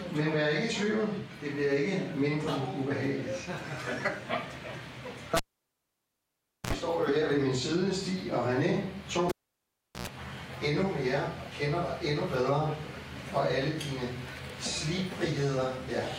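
At 5.37 s a cable gets pulled and plugged in while live: a pop, about 1.3 s of near silence, then a 66 ms burst of 60 Hz mains buzz as only the plug tip makes contact, and another pop when the signal returns at 6.73 s. It happens again at 9.29 s, with a shorter dropout of about 0.73 s, a 100 ms buzz on reinsertion, and the sound back by 10.07 s.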